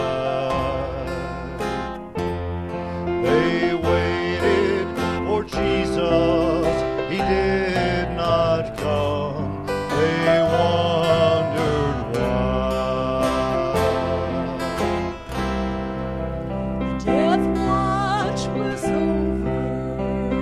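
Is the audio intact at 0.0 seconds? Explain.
Yes, the audio is intact at 0.0 seconds, with no dropout, click, distortion or other fault at the opening moment.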